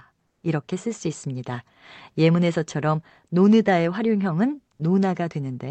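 Comfort noise in place of the background runs from 0.27 to 0.43 s in this speech recording, where about 160 ms of real room tone becomes a flat, featureless hiss roughly 2 dB quieter, likely from Opus discontinuous transmission muting the sender and the receiver synthesising filler noise. The audio tops out near 8 kHz, as expected from the Opus call path.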